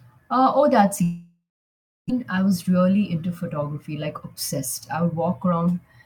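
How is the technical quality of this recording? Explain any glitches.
Two network-related glitches disturb this speech recording.

Between 1.03 and 2.12 s, after "oh that's", a long network dropout likely occurred. Concealment stretches a fading buzz or hiss, then roughly 0.66 s of silence. The speech resumes at "I was", with about 0.96 s lost. Unlike a brief packet loss, it isn't smoothly bridged.

From 5.03 to 5.69 s, a jitter buffer speed-up trims pitch-period pieces, roughly 50 ms in all. Speech runs about 108% fast yet keeps its pitch, unlike a resampling error, which would raise it.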